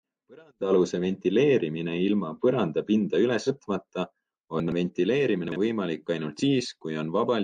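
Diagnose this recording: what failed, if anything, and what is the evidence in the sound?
Compressed frames skipped, a codec or storage fault. At 3.46 to 3.49 s the speech jumps ahead by roughly two frames, about 100 ms, and at 6.39 to 6.42 s by about one frame, around 50 ms, consistent with 46.4 ms frames.

Chunks out of order, probably in the buffer or network path. At 4.6 to 4.72 s a 40 ms chunk plays two chunks late, and at 5.48 to 5.56 s one plays a single chunk late. Nothing goes missing, but each spot sounds jumbled.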